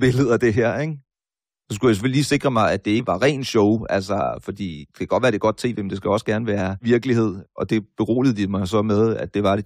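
At 2.98 to 3.00 s, compressed frames are skipped. The speech jumps ahead by about a tenth of a second. That fits roughly four lost frames of about 23 ms each. The decoder never plays them.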